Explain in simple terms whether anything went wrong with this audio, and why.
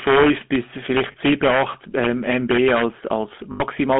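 A few things went wrong here, all at once in this speech clip.

The first is integer overflow. Somewhere in the processing, a level calculation ran past the biggest number it could hold, and instead of stopping at the limit it flipped over to the opposite extreme. Only the loudest moments went over, a tiny fraction of the audio, so you hear it as sharp cracks on the peaks rather than a constant buzz. It's much spikier than ordinary clipping.

The second is the GSM full-rate codec, the old original mobile-phone voice format, and its damage is plainly audible the whole way through. It rebuilds the voice from a rough model of the throat fed with a regular train of pulses, which gives speech that buzzy, gravelly texture. On top of that, the sound is squeezed into a phone-line band, roughly 200 Hz up to 3.4 kHz, so it's thin and missing its top end.

The third is lost GSM frames, which happened twice. 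When a chunk of the signal goes missing, the decoder fills the gap by repeating the settings from the last good chunk, so the sound gets held as a rough, metallic ring instead of dropping out. The first gap is brief, around 1.12 s, about the length of one frame. The second runs from 3.52 to 3.62 s, around a tenth of a second, which fits about four frames lost in a row, so the ring hangs on longer there.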